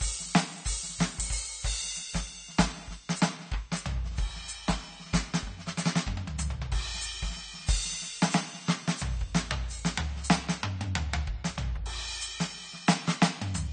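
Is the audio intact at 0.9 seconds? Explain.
No, at 0.9 seconds the music carries AAC compression damage that runs through the whole clip. Nothing survives above about 9 kHz, and sustained tones warble and smear. That's likely an AAC-LC encoder starving at a low bitrate, around 32 kbps, dropping and coarsely quantising high-frequency bands.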